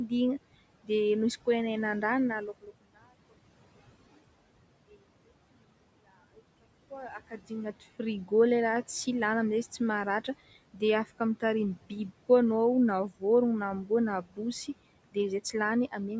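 Noise suppressor artifacts run through the whole clip. The suppressor pulls the steady room noise, which sits about 19 dB below the speech, down by about 18 dB in the pauses and lets it return under each phrase, so the background pumps with the talking.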